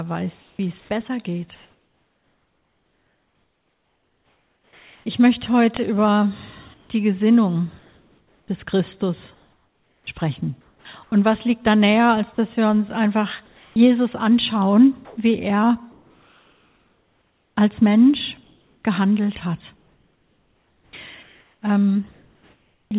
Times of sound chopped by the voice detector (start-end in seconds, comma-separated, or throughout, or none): 6.74-11.12, 13.46-22.91